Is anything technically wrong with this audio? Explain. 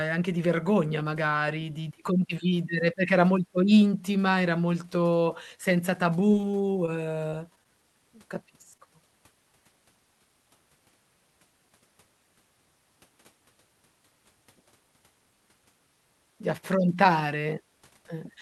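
Yes, there are packet-loss problems in this speech, all over the call path, which sounds like Opus with the top end stopping around 12 kHz.

Repeated packet loss (robotic sound) hits from 6.31 to 6.90 s, right after "intima era molto senza". Four gaps arrive in quick succession, none longer than 20 ms. Each one gets patched by stretching out the previous sound, so about 11% of that span is filler, and it comes out choppy and robotic.

Short concealed packet loss then shows up at 7.30–7.34 s, 7.55–7.68 s, 7.63–7.67 s and 8.77–8.87 s. Each time, about 20 ms of audio didn't make it, and the receiver bridged the hole by extending what it last had before blending back in. You hear a quick smear or wobble rather than silence, and around 7.6 s and 8.8 s the timing stretches slightly, by a few hundredths of a second.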